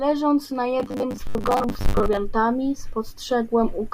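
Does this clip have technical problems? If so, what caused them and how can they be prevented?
Yes, from 0.8 to 2.2 s the speech goes robotic from repeated short buffers: a metallic 100 Hz buzz, likely roughly half the audio replaced by loops of one 10 ms chunk. A larger jitter buffer or steadier audio delivery would prevent it.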